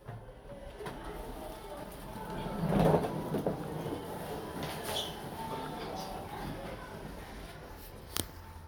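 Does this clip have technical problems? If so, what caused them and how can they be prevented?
No, there's nothing technically wrong to hear in these everyday sounds, so there's no cause to track down and nothing you need to prevent.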